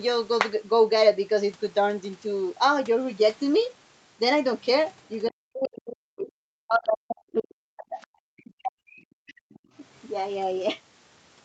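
This speech clip has two problems, both pointing back to the echo canceller on the talker's end. First, there's the other side's voice leaking through in three tiny scraps: 4.61 to 4.65 s and 4.87 to 4.92 s, both very faint, way down under the speech, then a slightly stronger blip from 9.53 to 9.59 s. They're only tens of milliseconds each, so they come across as brief fragments. The likely cause is far-end audio from the loudspeaker getting back into the mic and not being fully cancelled. The bigger issue is speech suppressed in double talk. From 5.29 to 6.31 s, and again over a long stretch from 6.63 to 9.52 s, the talker's level sags hard, by something like 40 dB at its worst, so the voice thins out and drops away in pieces for roughly four seconds in total. That's most likely the canceller hearing both sides at once, failing to tell its own talker from the echo, and clamping down on everything. 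Throughout, the sound has the band-limited call-codec character, with nothing above about 8 kHz.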